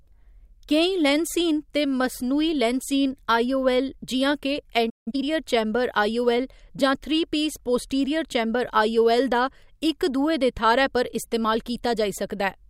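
This speech clip has a playback stall followed by time-compressed catch-up. At 4.89 s the speech cuts out mid-flow and falls silent for about 165 ms, resuming at 5.08 s. The sudden gap points to the player likely running short of data or having its output thread blocked, so nothing reached the output until it recovered. Right after the gap, from 5.08 to 5.24 s, the speech sounds hurried while its pitch stays normal. It plays at twice its usual rate just before "चैंबर आई". This is the player working off the backlog left by the stall. It drops small slices of audio and cross-fades across each cut, which speeds up delivery without raising the pitch.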